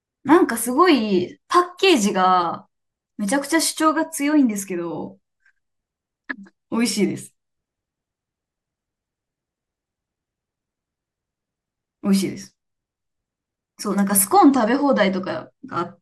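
No technical faults are audible anywhere in the speech.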